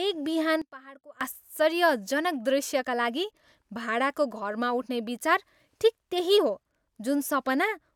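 A sudden gain jump runs from 0.62 to 1.21 s, where the level drops by about 20 dB in a single step and snaps back just before "आश्चर्यजनक दृश्यका लागि भाडाको". Speech and background noise fall and return together, likely from a digital gain change applied without any ramp.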